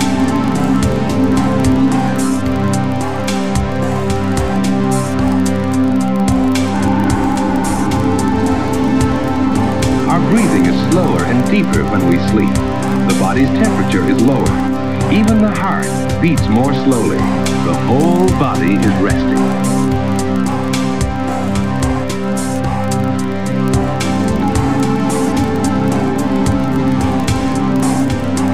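A 25 Hz buzz runs through the whole audio: the filter is restarted on every block, so each block starts with a small transient. Unlike mains hum, the buzz follows the signal's level and falls silent with it.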